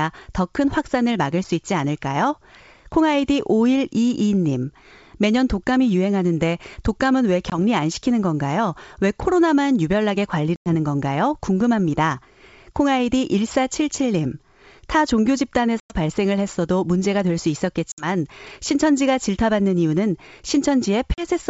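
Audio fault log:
7.50–7.58, 10.56–10.73, 15.80–15.94, 17.92–18.07, 21.14–21.25 s: packet loss on an ADPCM call. Hard-edged silent holes of 20, 100, 100, 60 and 40 ms, consistent with dropping one to five 20 ms packets. Unlike smooth concealment, the sound returns slightly distorted while the ADPCM predictor and step size resynchronise.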